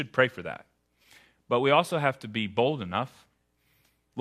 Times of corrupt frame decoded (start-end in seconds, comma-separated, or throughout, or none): 1.01-1.14